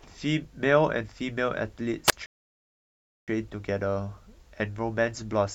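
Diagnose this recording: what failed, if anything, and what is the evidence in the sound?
A wireless microphone squelch dropout occurs at the radio link, 2.07 to 2.13 s. Hiss rises, then a 25 ms mute. The fading signal tripped the receiver's squelch.

A rebuffering stall follows at the playback stage, 2.26 to 3.28 s. The speech halts in silence, then resumes where it stopped. The player ran dry, adding about 1.02 s.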